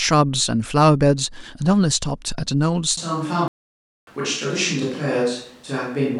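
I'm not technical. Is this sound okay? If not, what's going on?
No, there are two problems. A switch to a distant microphone happens at about 2.98 s and lasts to the end. From that moment the voice suddenly sounds roomy and hollow, thinner in the low end, somewhat quieter, and with more background noise around it. The likely cause is that the close microphone near the speaker dropped out or wasn't used, so the recording fell back on one farther away, such as a camera's built-in mic.

A playback stall follows from about 3.48 s to 4.07 s. The sound simply stops mid-flow for roughly 0.6 seconds and then carries on. This likely happened because the player ran short of incoming audio data, or was briefly held up by something else, and it had nothing to play until it caught up again.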